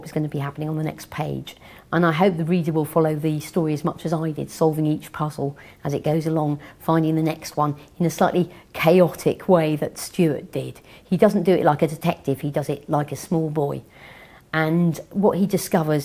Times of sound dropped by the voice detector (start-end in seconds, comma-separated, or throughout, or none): none